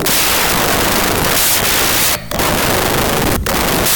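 Throughout, wrong sample width: 32-bit samples read as 16-bit split in two, the low halves pure noise, leaving speech under loud hiss at half speed.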